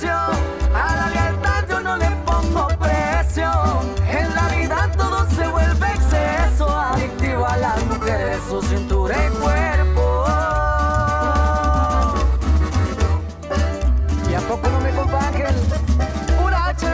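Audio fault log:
No faults found in the reviewed audio; nothing to log.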